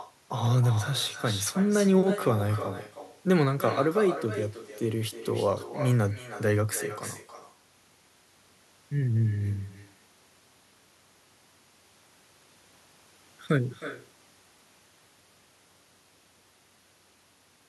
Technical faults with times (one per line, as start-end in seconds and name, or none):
0.00-17.68 echo with no canceller